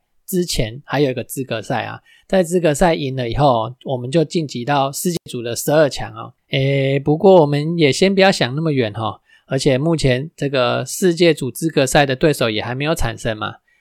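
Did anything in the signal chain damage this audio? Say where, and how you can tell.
Yes. At 5.15 to 5.26 s the speech gives way to a brief rise of hiss and then about 93 ms of near silence before returning. That is a wireless microphone squelch dropout: the analogue radio link faded and the receiver's squelch muted its output.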